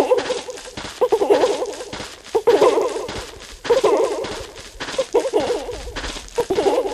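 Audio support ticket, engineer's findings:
Whole clip: every sound recurs about 1.5 s later at roughly equal level, a dry full-band repeat with no decay or room colour. Doubled audio track, likely a second capture path or misaligned edit mixing in an out-of-step copy.

6.09–6.54 s: burst of gritty crackle over the sound, then clears. Processor overload crackle. Overloaded DSP/host missing consecutive buffer deadlines, each miss leaving a hard-edged sliver of silence. Fits a very short buffer, around 1.5 ms, with roughly twenty misses.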